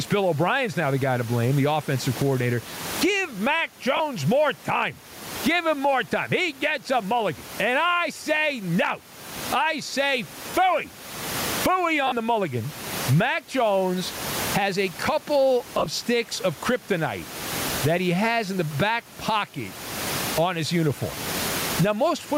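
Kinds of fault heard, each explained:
Gain pumping: The level breathes throughout, swinging by roughly 25 dB, and loud and soft passages sit squeezed close together. The likely cause is a fast limiter or compressor reacting to gain set far too high for the microphone. On a waveform the envelope looks flattened, with the floor rising between phrases. A spectrogram shows background energy brightening in gaps and dimming under speech.
Lost LE Audio frames: Missing Bluetooth LE Audio frames made the LC3 decoder repeat the last spectrum with randomised signs, turning voiced sound into a brief noisy smear. Gaps last 30 ms at 3.97 s before "more time", 40 ms at 10.50 s after "say no I say", 50 ms at 12.07 s before "the mulligan", and 60 ms spread over 80 ms at 15.78 s. On a spectrogram the harmonic lines dissolve into short broadband smudges, and the waveform shows matching noisy patches.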